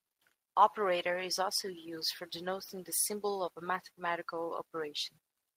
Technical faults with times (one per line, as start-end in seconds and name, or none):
none